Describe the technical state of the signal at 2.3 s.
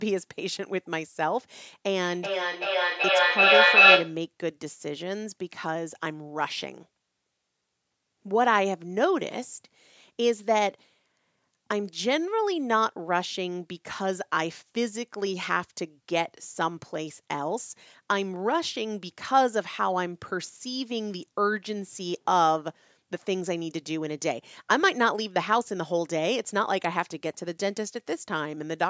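At 2.3 s there is feedback howl, running from 2.02 to 4.23 s. The mic-to-speaker loop keeps gaining level. A tone near 3 kHz swells to about 10 dB above the speech, pulsing roughly every 0.4 s.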